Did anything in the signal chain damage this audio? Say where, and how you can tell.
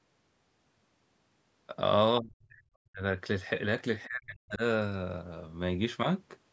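Yes. The damage is in the call processing stage, most likely the echo canceller mishandling double talk. With both ends talking at once, it could not tell the local talker from loudspeaker echo and turned everything down. The speech drops by as much as about 40 dB from 2.2 to 2.63 s, again from 2.82 to 3.02 s, and from 4.07 to 4.62 s. Each time the speech thins or chops out instead of fading naturally. This is speech suppressed in double talk.

The same stage shows a brief case of the other side's voice leaking through, from 4.03 to 4.07 s, just before the last suppression. A short scrap of a second voice sits roughly 30 dB below the main speech. The likely cause is residual loudspeaker echo that the canceller failed to subtract from the microphone signal, so a fragment of the far end slips through before suppression clamps down.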